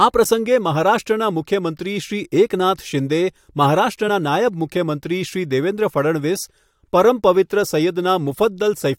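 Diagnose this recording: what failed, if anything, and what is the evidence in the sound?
The failure is in the codec stage: damaged data in a compressed stream. At 4.07 s the speech is broken by a brief glitch, under two hundredths of a second long. Its shortness points to corrupted bytes in the stored or transmitted stream, not a wiring or converter fault. The decoder misread the bad frame, lost sync, and searched for the next valid frame header. The garbled output comes from that failed decode.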